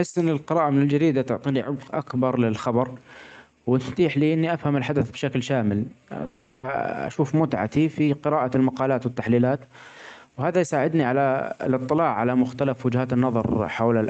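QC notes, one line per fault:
6.25–6.65 s, long network dropout: Audio most likely stopped arriving for about 0.4 s, so the receiver filled roughly 380 ms by stretching the last sound into a buzzy, fading continuation instead of real signal. The gap never falls to true silence, but the original audio from that stretch is gone, and the speech resumes further on with that part skipped. The concealment carries the same top limit near 8 kHz as the rest of the Opus call audio.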